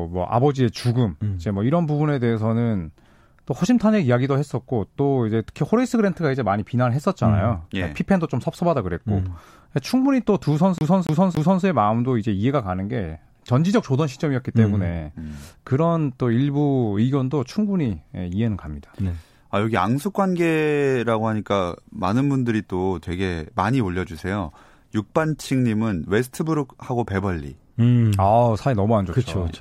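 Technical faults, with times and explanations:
10.78 to 11.64 s, CD stuck on one turn: a 0.28 s slice of the speech plays three times in a row, each pass broken by a brief mute where the laser jumps back one track, giving the even, mechanical stutter of a skipping disc. On a waveform the same envelope shape repeats at exact 0.28 s spacing with thin gaps between copies; a spectrogram shows identical blocks of harmonics stamped side by side, each cut off by a narrow vertical silence.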